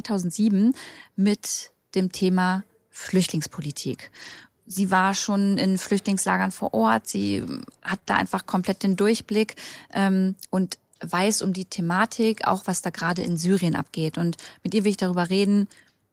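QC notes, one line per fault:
4.21–4.43 s, 7.87–7.97 s, 8.07–8.33 s, 8.91 s and 12.99–13.37 s, lost packet rebuilt from error correction: no gap, but these stretches turn rough, grainy and noisier. Packets went missing, and the decoder played the low-bitrate copies carried in the following packets. Those copies lack the highest frequencies, so the decoder has to estimate them. The rebuilt runs total 120, 60, 140, 20 and 200 ms.
7.99–8.07 s, short concealed packet loss: two back-to-back losses of about 20 ms each, sitting between two rebuilt stretches, come through as a brief smear or wobble. Nothing arrived in time, so the receiver extended the preceding sound, following its pitch if voiced or as shaped noise if not, then crossfaded back into real audio.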